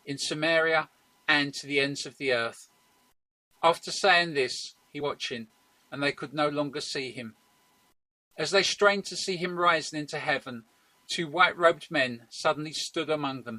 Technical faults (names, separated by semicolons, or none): low bit depth without dither; stream segment skipped